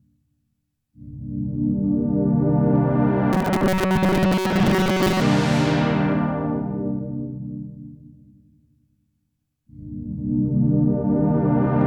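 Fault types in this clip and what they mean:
Robotic sound from repeated short buffers: a rigid, metallic 188 Hz buzz covers most of this stretch, likely a 5.3 ms slice looping rather than silent dropouts.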